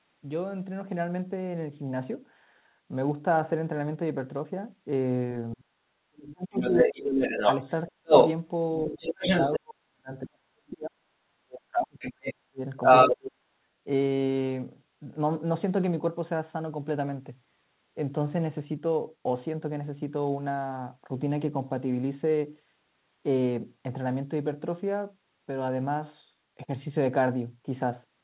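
From 5.54 to 6.97 s the echo canceller likely failed to separate the talker from the loudspeaker echo while both sides spoke, so this is speech suppressed in double talk. The voice is pushed down by about 35 dB, for roughly a second in total. Starting at 6.57 s and running to 8.3 s, residual echo likely passed the canceller, so the other side's voice leaks through, about 5 dB louder than the talker. Inside that stretch, from 7.6 to 8.11 s, the same likely double-talk suppression cuts the talker by about 40 dB for around 0.3 s.

The longest suppression, also likely from double talk, runs from 8.87 to 13.26 s. It dips the voice by about 40 dB across roughly 3 s. During this, the other side's voice likely leaks through uncancelled twice. From 8.97 to 9.59 s it is about as loud as the talker. From 11.99 to 13.31 s it is about 10 dB louder. Throughout, nothing above 4 kHz is present, which fits a 64 kbps G.711 mu-law call path.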